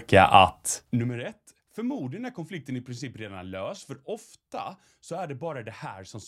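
From 0.68 to 1.12 s, zipper noise: the level falls about 20 dB in unsmoothed 1 dB steps, roughly fifty per second, each step adding an audible tick.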